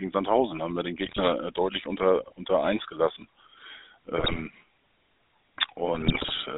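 A buzzy, gravelly roughness runs through the whole recording, with nothing below about 250 Hz or above 3.7 kHz. That is the GSM full-rate codec, which rebuilds the voice from a vocal-tract model driven by a coarse pulse excitation, a sound that fits its 13 kbps mode.

Squawks and gargling burst in from 1.06 to 1.21 s, between "haben wir den" and "äh deutlich unter unter", again from 4.18 to 4.43 s, and longest from 5.94 to 6.39 s. These are GSM bit errors: corrupted filter, pitch and gain values that distort each damaged frame.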